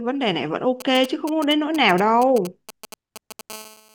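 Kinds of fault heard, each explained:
GSM signalling bursts: A nearby 2G phone is exchanging short bursts of radio traffic with the network, and the audio circuitry rectifies them. From 0.80 to 3.41 s this puts a galloping dit-dit-dit of brief 217 Hz buzzes under the speech, roughly 15 dB down.
GSM phone buzz: A 2G phone in a call transmits continuously at 217 bursts per second, which the audio path demodulates. From 3.5 s to the end, a steady, hard, raspy 217 Hz buzz rich in harmonics sits about 20 dB below the speech.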